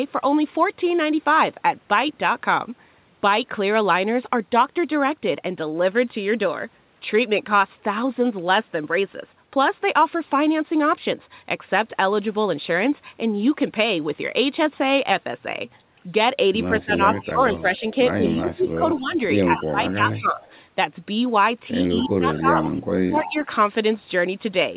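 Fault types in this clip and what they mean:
speech suppressed in double talk: Between 16.76 and 20.45 s and again from 21.95 to 23.5 s, the talker's level sinks while the far side is also speaking, by about 15 dB at worst in the first stretch and about 25 dB in the second, roughly two seconds and one second of it in total. This is likely the echo canceller ducking everything it cannot separate. Unlike a network dropout, the dips follow the overlap in talking rather than arriving at random.
echo leak: A delayed copy of the voice trails it by 188 ms in three stretches, 16.81 to 17.95 s, 18.6 to 20.55 s and 21.98 to 22.7 s, sitting about 25, 20 and then 15 dB below the direct speech. This is likely a speakerphone's canceller letting part of its microphone pickup back into the call. Unlike room reverberation, it is a distinct repeat at a fixed lag, and it coincides with the suppression dips.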